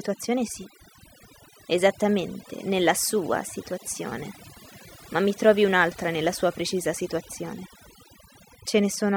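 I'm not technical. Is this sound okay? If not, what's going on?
No, it has overdone noise removal running the whole way through. A cleanup tool was pushed too hard, so the background drops and breaks up into little twinkly specks, and the softer parts of the speech get scooped out.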